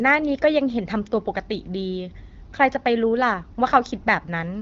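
No technical faults can be heard anywhere in the clip. The speech has passed through an AMR wideband (HD Voice) codec at a rate of 12.65 kbit/s, which leaves it clear with only light coding damage, and there is no content above about 7.4 kHz.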